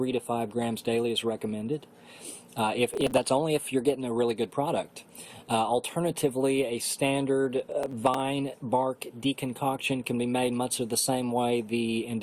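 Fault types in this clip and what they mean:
Processor overload crackle: from 2.90 to 3.24 s and again from 7.60 to 8.20 s, the processor falls behind and misses the deadline for a long run of very short buffers, each well under a millisecond. Every missed buffer is simply dropped, leaving a tiny hard-edged gap. Dozens of these in the first burst and a smaller cluster in the second stack into a gritty, tearing crackle over the sound, ending as soon as the load eases.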